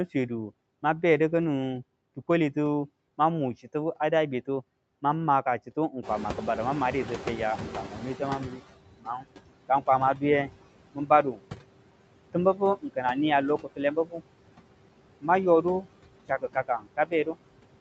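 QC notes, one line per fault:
Throughout: noise suppressor artifacts. The background sinks between phrases and swells back under the speech. The suppressor is cutting the bands it judges to be steady noise by about 21 dB, frame by frame, so the residual keeps shifting.
6.02 to 8.66 s: noise suppressor catching up. Right after the room noise jumps by about 16 dB near 6 s, it comes through with less reduction, then fades over 2.64 s. The noise estimate lagged the rise and then adapted, reaching a cut of about 17 dB.
7.87 to 17.35 s: speech cut by the noise suppressor, in three stretches, 7.87 to 11.4 s, 12.33 to 14.21 s and 15.21 to 17.35 s. Soft consonants and word endings sound swallowed, dropping by about 19 to 20 dB, for roughly half a second to 0.7 s in each stretch. The suppressor is treating quiet parts of the speech as noise, which is more likely now that the room noise sits only about 12 dB below the speech.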